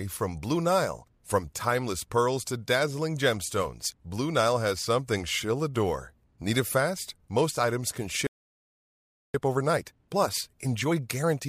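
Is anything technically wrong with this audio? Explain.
Yes, this speech clip has two linked faults. From 8.27 s to 9.34 s, right after "items can", there is a playback stall: the output goes silent for about 1.08 s, likely because the player ran out of buffered data or its thread was blocked. It then resumes where it stopped, unlike a dropout that skips material.

From 9.34 s to the end, time-compressed catch-up follows. The player trims small pieces and cross-fades the joins to work off the backlog, so the speech runs about 1.15 times faster. The pitch stays normal, which separates it from simple fast playback.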